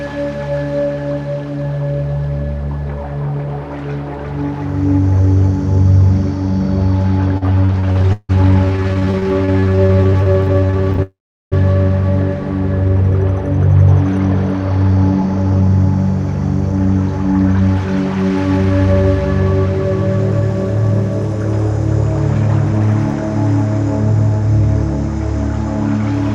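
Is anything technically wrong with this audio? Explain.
Yes. Repeated stalls (stutter) run from 7.37 to 11.00 s: packets arrived late or too slowly, so the jitter buffer emptied 63 times, the receiver stretching the last sound each time, up to 163 ms per gap. About 1.1 s of filler covers 30 percent of that stretch, so the sound drags and stutters, though nothing is lost.

A call audio freeze follows from 11.02 to 11.54 s, likely from packets held up in transit. The buffer ran dry, the last sound was continued and faded, and about 380 ms of it is silent before the audio resumes where it stopped, 492 ms late.

Jitter buffer speed-up runs from 13.01 to 19.03 s and again from 22.34 to 22.87 s. To shed the delay built up earlier, the receiver cut many tiny pitch-period slices, around half a second in the first span and a few tens of milliseconds in the second, so the sound plays 8 and 7 percent fast at unchanged pitch and feels hurried.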